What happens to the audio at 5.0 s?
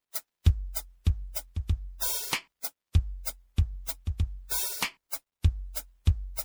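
Generation loss is present at 5.0 s, as it is across the whole music clip. The swirl, hollow smeared tone and softened attacks point to the audio having likely been run through MP3 around five times, each pass re-quantising on a shifted frame grid, which fits roughly 96 kbit/s encoding.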